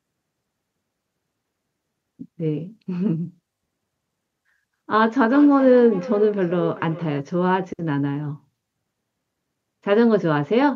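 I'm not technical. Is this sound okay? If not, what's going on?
No. From about 5.3 to 7.2 seconds there's feedback echo between two devices: two gadgets in the same room on one call, each microphone catching the other's speaker. The speech comes back roughly every 0.4 seconds, fainter, thinner and more ringing each time.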